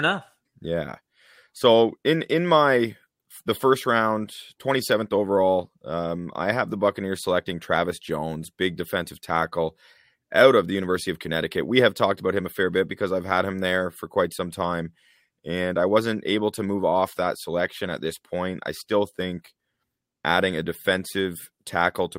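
No technical faults can be heard anywhere in the speech recording, and the signal stays intact and steady throughout.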